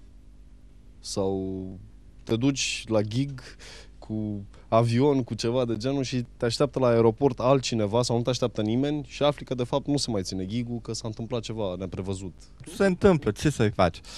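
No technical fault can be heard anywhere in the recording; the signal stays continuous and stable throughout.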